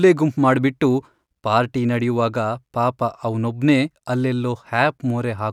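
No technical faults are audible anywhere in the speech recording.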